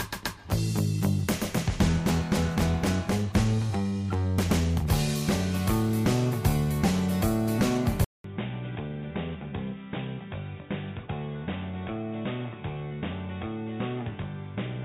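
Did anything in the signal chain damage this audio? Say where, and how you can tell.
Yes. At 8.04 s the sound drops out for 0.2 s, then returns about 10 dB quieter, with nothing above 3.7 kHz and a faint new noise floor. The likely cause is the input switched to a poorer device, not codec band-limiting, which would leave level and noise unchanged.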